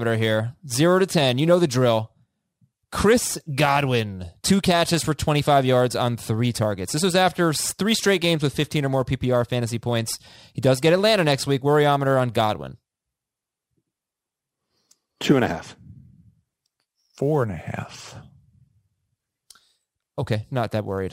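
Sample clock jitter runs throughout: the converter clock wanders by several microseconds, so samples land early or late and the error tracks waveform slope. The result is a roughness roughly 25 dB below the speech, strongest on loud, bright sounds, and gone in pauses.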